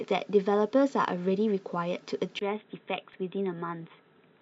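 At 2.39 s the sound changes character and stays that way to the end. It goes dull and boxy. Nothing is left above 3.9 kHz. The level drops by about 5 dB. A new background noise appears, roughly 40 dB below the signal. A brief 20 ms silence marks the change. This is the pattern of an input switched to a poorer device. The recording likely moved to another microphone or a headset's call profile, with a narrower band and its own noise.

At 3.14 s there is a tiny skip in the sound. The waveform jumps because a few milliseconds are missing. This comes from overlap between stream segments. Two segments carried time stamps that overlapped, and the player trimmed that stretch even though it was not actually doubled. The result is a sudden discontinuity, which the ear catches as a tiny skip.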